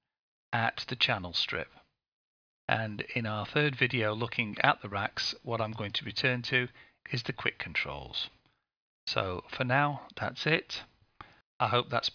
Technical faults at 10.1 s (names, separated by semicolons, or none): none